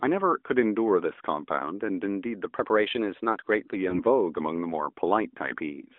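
From 2.56 to 3.76 s the speech runs about 6.35% fast and sits roughly 107 cents sharp, just over a semitone. This is likely a drift correction step. On a spectrogram, the harmonics jump upward together.

From 3.90 to 4.02 s comes a brief dip with a warbling smear, which fits a single lost 20 ms AMR speech frame. The decoder fills the gap with fading repeated sound. The waveform shows an envelope sag, and the spectrogram shows blurred, stretched harmonics inside the AMR-NB band.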